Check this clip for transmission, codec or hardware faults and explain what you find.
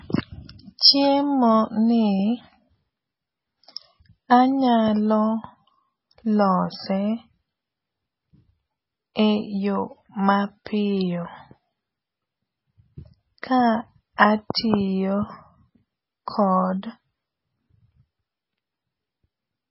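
Two codec faults are present: heavy lossy compression across the whole clip and two brief pre-echoes.

MP3 compression is audible throughout. The speech has nothing above 5.6 kHz, so s sounds lose their crispness and the top end sounds dull and closed in. The damage is heavy, with a watery, swirling texture where weak frequency components flicker in and out between frames. This is likely an MP3 encoder starved of bits, which fits a very low bitrate around 16 kbps. The encoder discards the treble and zeroes quieter detail to stay within budget.

Pre-echo occurs at 10.65 s and again at 13.42 s. Each sharp onset is preceded by a short smear of hiss, about 15 ms long at the first point and 13 ms at the second. The transform coder spreads quantisation noise over its whole block. When an attack lands late in a block, noise sized for the loud part leaks into the quiet gap just before it, so the onset sounds blurred.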